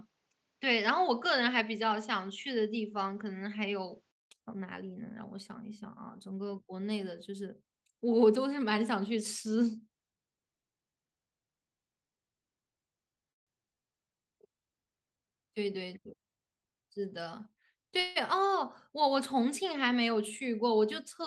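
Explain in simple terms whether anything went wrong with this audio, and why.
For the first 4.31 seconds the sound is dull and muffled, with nothing above about 7.6 kHz and a faint background hiss of its own. At 4.31 seconds there is a silence of about 0.2 seconds, and then the sound opens up and becomes clearer, at much the same loudness. This is an input switched to a poorer device. The recording likely began on a weaker microphone or a headset's call mode, which passes a narrower range of tones, before changing over to the better input.

At 13.31 seconds the sound stops for about 0.15 seconds, almost all of it silence, and then carries on. At 18.00 seconds there is a similar pause of about 0.16 seconds, but this one is filled with a short fading buzz that stretches out the last bit of sound. Both are a call audio freeze. Delivery of the audio was likely held up, and the receiver had nothing to play until it arrived. 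Nothing is lost. The sound simply resumes a little later.

From 13.74 to 14.06 seconds the sound drags, running at about 84% of normal speed while keeping the same pitch. That short stretch gains about 60 milliseconds. This is a jitter buffer slow-down. The receiver's small store of waiting audio was running low, so it repeated tiny slices of sound to build that store back up.

From 15.35 to 16.81 seconds the opposite happens. The sound is slightly hurried, at about 110% of normal speed, again with no change in pitch. About a seventh of a second is trimmed out in total. This is a jitter buffer speed-up. Too much audio had piled up waiting to be played, so the receiver cut out many tiny pieces to catch up and reduce the delay.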